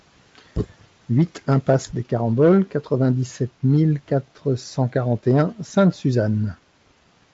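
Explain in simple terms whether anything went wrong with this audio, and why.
Nothing went wrong here.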